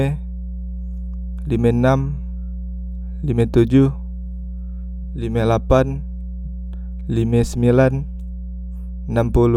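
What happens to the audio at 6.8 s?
At 6.8 s, as through the whole clip, a ground loop or nearby transformer is coupling the 60 Hz power line into the signal. The result is mains hum, a steady low drone with some low harmonics, sitting loud beneath the speech, roughly 10 dB down.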